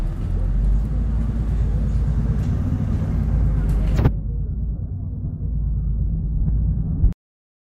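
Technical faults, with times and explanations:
7.13 s, cut-off end: the final stretch of buffers was never written, so the sound stops abruptly mid-event and drops straight to digital silence without any natural decay.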